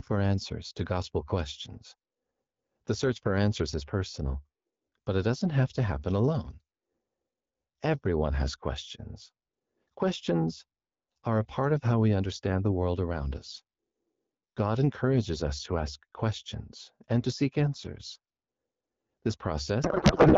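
From 19.83 s to 20.38 s the speech turns into garbled noise and warble that barely tracks it: a codec payload misread, pointing to octet-aligned AMR frames decoded as bandwidth-efficient.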